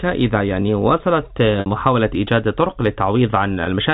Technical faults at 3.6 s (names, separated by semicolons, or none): packet loss with pitch repetition